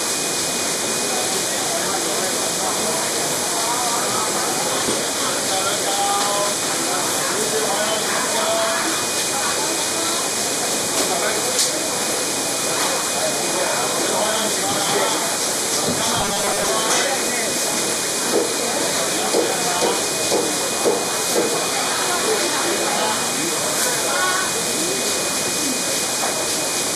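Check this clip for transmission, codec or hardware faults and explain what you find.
One fault turns up, from 16.20 to 16.69 s: robotic sound from repeated short buffers. Audio likely arrived too seldom, so a snippet of about 5 ms was looped through roughly half that stretch, imposing a rigid, metallic 200 Hz buzz.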